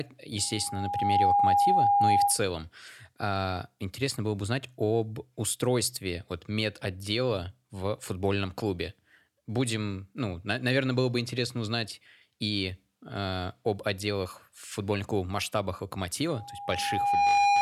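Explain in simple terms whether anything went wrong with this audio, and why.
Loudspeaker feedback squeal appears twice, from 0.38 to 2.42 s and again from 16.3 s after "футбольных клубов в масштабах" to the end. The microphone re-captured its own loudspeaker, so an 811 Hz tone fed on itself, swelling within about a second into a loud whistle above the speech.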